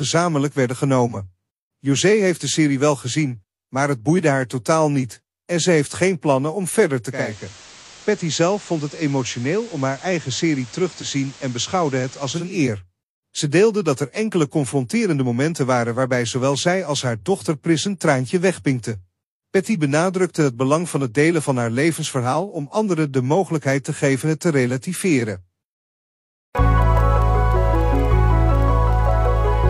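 At 7.06 s the digital radio blending to analogue kicks in: the receiver drops its digital stream and fades over about 307 ms to the FM feed. Until 12.61 s the level sits about 2 dB lower, and hiss rides roughly 20 dB under.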